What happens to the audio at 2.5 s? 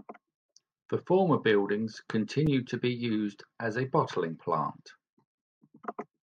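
At 2.47 s, between "former buildings" and "to be used as", there is a block of digital silence. For about 4 ms the audio cuts out and returns abruptly, producing a tick.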